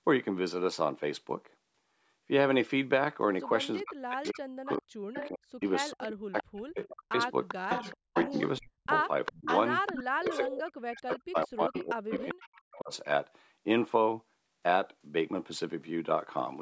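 From 3.77 to 5.29 s an echo leak begins: a copy of the speech returns about 396 ms late, at about 10 dB below the direct voice. A far-end loudspeaker's echo canceller likely let part of its microphone pickup through. The copy is a distinct repeat at a fixed delay, not a room tail fading smoothly, which separates it from reverberation. It returns at 6.01 to 6.88 s (about 15 dB down), 7.48 to 8.41 s (about 5 dB down, the loudest), 8.99 to 11.16 s and 11.74 to 12.96 s (both about 10 dB down).

Overlapping this, from 3.8 to 9.49 s and again from 10.19 to 12.92 s, comes speech suppressed in double talk. The talker's level dips in pieces, as deep as roughly 40 dB, for around three seconds in the first stretch and two in the second. The canceller likely ducked both the echo and the talker while the two sides overlapped. Unlike packet loss, the cuts track the overlapping sound rather than falling at random.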